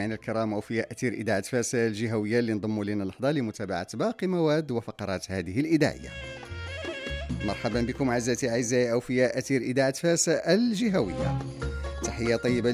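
No technical faults can be heard anywhere in this recording.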